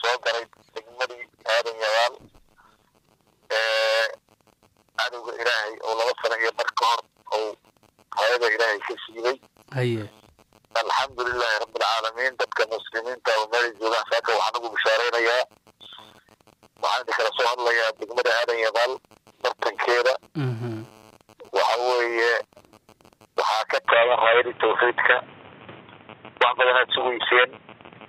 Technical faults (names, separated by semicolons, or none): input switched to a poorer device